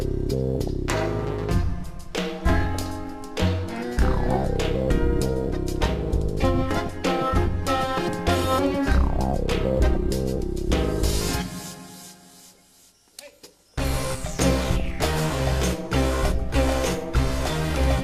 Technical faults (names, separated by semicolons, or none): DAB burbling